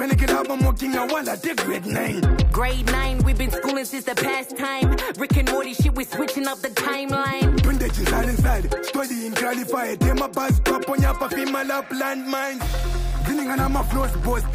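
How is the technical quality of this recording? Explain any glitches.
The technical quality of this recording holds up, with no glitches to explain.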